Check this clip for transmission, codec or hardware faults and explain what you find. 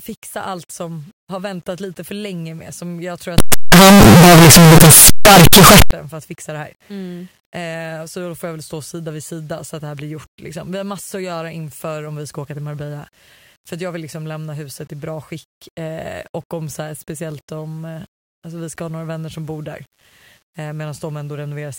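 One fault is clear. From 3.38 to 5.91 s, between "jag tror" and "för att fixa det", the speech becomes very loud, harsh distortion. This is likely a signed and unsigned mix-up, with the 8-bit samples read with their top bit flipped so that every zero crossing jumps across the whole range. Quiet moments blast as loud as the rest.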